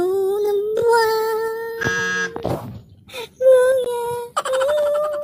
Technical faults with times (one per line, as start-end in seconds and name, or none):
1.83 gap at a join of encoded pieces
3.84 gap at a join of encoded pieces